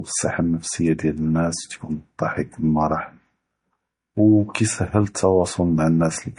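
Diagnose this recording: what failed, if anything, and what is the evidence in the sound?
At the codec stage, this is likely low-bitrate audio saved at a high bitrate: the speech stops sharply at 10.6 kHz throughout, a cut-off typical of roughly 40 kbit/s MP3 that re-encoding cannot restore.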